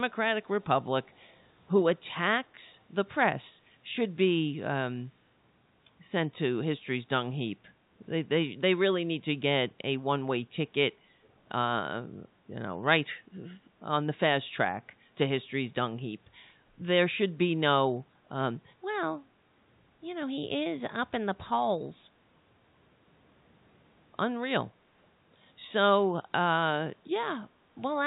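At 1.11 to 1.24 s there's a very faint echo leak: a delayed copy of the speech, about 186 ms behind, likely from a speakerphone whose canceller let some through.

Then from 10.97 to 11.21 s the background is gated by the echo canceller, clamping the mic so the room sound dips about 7 dB for roughly a fifth of a second.

Right after, at 11.24 to 11.28 s, the same faint echo leak returns briefly, again trailing by 186 ms, all heard through the telephone band of the G.711 line.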